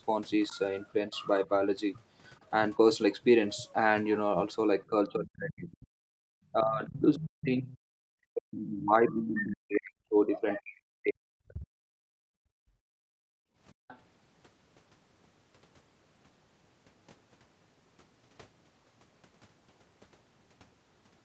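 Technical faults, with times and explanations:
4.9–5.79 s and 6.51–11.95 s, speech suppressed in double talk: the speech dips by up to roughly 40 dB, in pieces totalling about 0.7 s and then about 5 s. This is likely an echo canceller that could not separate the near talker from loudspeaker echo during simultaneous talk, and attenuated both.
5.47–5.87 s, 7.15–7.77 s, 8.58–9.45 s and 13.88–13.98 s, other side's voice leaking through: a second voice sits underneath, around 15 to 25 dB below the main speech. This is likely residual loudspeaker echo that the canceller failed to remove from the microphone signal.
6.07–6.23 s and 12.23–13.88 s, background gated by the echo canceller: the room sound drops by about 38 dB, then by about 34 dB for roughly 1.5 s. The canceller clamped the microphone hard while the loudspeaker played, and the ambience returns when it releases.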